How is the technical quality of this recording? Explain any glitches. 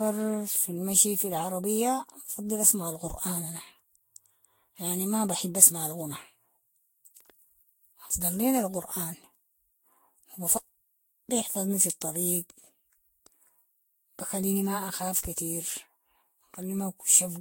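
The technical quality is poor throughout, because of one persistent fault. From start to finish the speech sounds swirly, smeared and hollow, with blurred consonant attacks and nothing above 16.6 kHz. That is generation loss, likely from the audio being decoded and re-encoded around seven times with a lossy codec at roughly 60 kbit/s, consistent with Vorbis. Each pass requantised the sound on a shifted frame grid, so the noise and spectral holes of every generation piled up.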